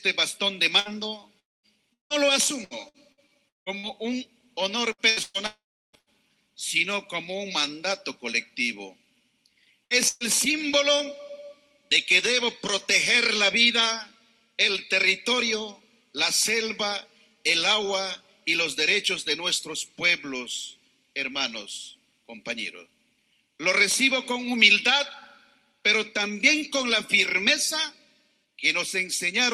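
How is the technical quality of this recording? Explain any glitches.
The recording has several network-related glitches in roughly its first ten and a half seconds, all typical of audio sent over a call connection with an unstable link.

Repeated packet loss (robotic sound) occurs from 0.79 to 3.86 s and again from 4.92 to 6.09 s. Packets kept going missing, and the receiver filled each hole by extending the last sound before the next loss arrived. The first stretch has seven gaps, the longest 176 ms, with about a fifth of it concealed. The second has four gaps, the longest 116 ms, covering about a quarter. The result is choppy sound with chunks missing.

A long network dropout is the likely cause of the deeper holes at 1.39 to 1.66 s and 5.46 to 5.96 s. At these points the audio briefly continues as a fading buzz or hiss and then goes silent, for about 220 ms in the first case and 340 ms in the second. 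When the audio returns, it resumes later in the stream, and roughly 240 ms and 480 ms of material are simply missing.

A burst of packet loss appears twice in quick succession, at 9.84 to 9.94 s and at 10.09 to 10.23 s. A short run of packets failed to arrive in time. The receiver stretched the preceding sound and faded it out across the gap, producing a brief held buzz or hiss. About 60 ms is lost in the first burst and 120 ms in the second, so the sound jumps forward slightly each time. All of this rides on the call codec's normal coding, whose top end stops around 12 kHz, which fits Opus at about 32 kbps.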